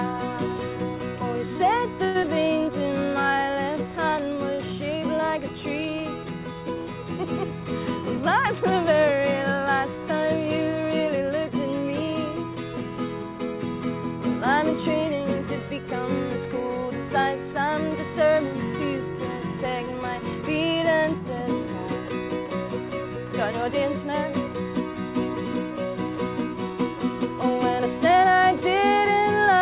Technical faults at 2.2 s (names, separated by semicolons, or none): call audio freeze; short concealed packet loss; jitter buffer slow-down